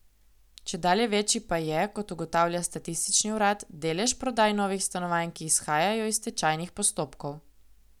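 No audible technical faults.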